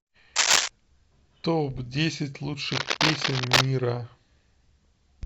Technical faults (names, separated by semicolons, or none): cable scratch noise; corrupt frame decoded